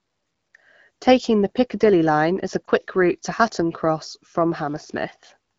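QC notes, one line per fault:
2.65–2.70 s: lost AMR speech frames, a brief warble or dip consistent with a single lost frame. The decoder bridges it with repeated, fading speech rather than silence.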